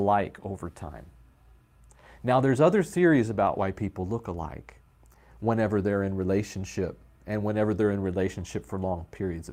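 Nothing goes wrong anywhere in this speech recording; there are no technical faults to point out at any moment.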